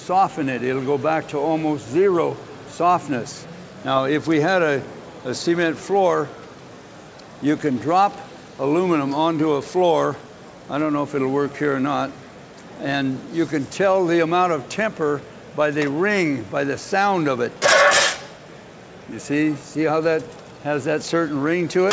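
No technical faults are audible.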